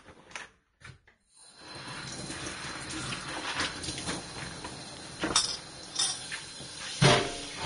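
Throughout the recording, the likely cause is Vorbis compression at a low setting, with damage consistent with a bitrate around 33 kbps. The encoder has discarded everything above 10.6 kHz, so the top end stops abruptly. Below that, the treble has been quantised so coarsely that its fine detail turns into hiss and grain of similar loudness. Tonal parts take on a rough edge, and sharp onsets come across smeared rather than crisp.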